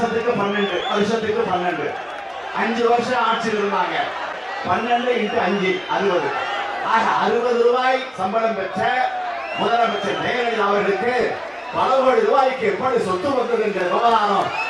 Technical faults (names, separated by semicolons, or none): lost LE Audio frames